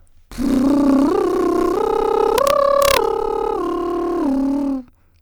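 From 2.38 to 2.97 s the music breaks into harsh, violent cracks on its loudest moments, far sharper and more abrupt than ordinary clipping. This is integer overflow: the signal was pushed about 1 dB past the largest value the integer format can hold, and instead of being limited at the ceiling, each peak wrapped around to the opposite sign, snapping across the full range and producing those sudden cracks.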